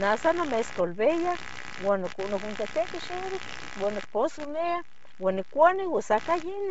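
From the very start the speech carries computer activity noise: a buzzy, scratchy chatter pulsing at roughly 70 times a second and sitting only about 15 dB under the talker. It follows the machine's load shifting the shared ground, not anything in the speech, and it runs the whole way through.

There's also a DC offset across the full clip. The waveform sits shifted off zero by a constant amount. You won't hear that directly, but it eats into headroom and shows up as a steady lump of energy at the very bottom of the spectrum.

On top of that, the top end is gone: nothing above 7.7 kHz, and the upper band that's left has a breathy, grainy, noise-filled edge. That points to heavy Bluetooth LC3 compression as the likely cause, consistent with a low bitrate around 24 kbps and short 7.5 ms frames.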